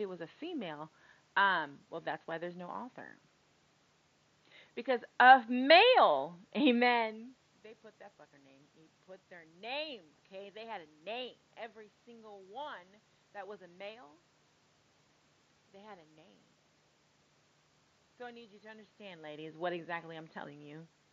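Nothing's gone wrong in this speech recording; there's just some room noise sitting about 53 dB under the talker, plus a couple of moments, around seven and nineteen seconds, where the talker shifts position relative to the microphone.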